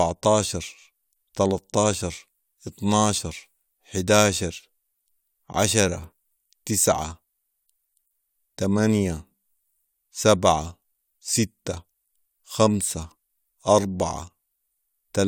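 Nothing goes wrong anywhere in this speech recording; there's no technical fault to point to at any moment.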